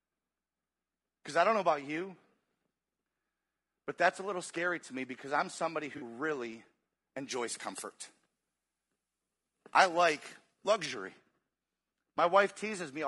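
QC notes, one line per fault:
throughout: low-delay AAC compression. The speech is rough and grainy, with noise filling the gaps between harmonics and a thin, synthetic-sounding top band. This is most likely AAC-ELD at around 32 kbps, whose short frames smear pitch detail. On a spectrogram, harmonic striations look blurred and the upper band patchy.
5.97–6.03 s: AAC frame loss with concealment. Right after "me because I'm somebody", about 40 ms turns into a brief smeared, noisy, phasey patch. That fits two lost frames, rebuilt by the decoder from the last good spectrum. A spectrogram shows a short vertical smudge where the harmonics lose definition. The waveform shows a slightly irregular envelope.
7.31–10.86 s: pre-emphasis left on. For this stretch the treble jumps, leaving the sound thin, bright and sibilant. The high end is boosted without the matching de-emphasis, by about 14 dB at 10 kHz relative to 1 kHz, which fits a 75 µs FM curve. 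A spectrogram shows a clearly brighter upper band for the span. The waveform looks spikier on sibilants.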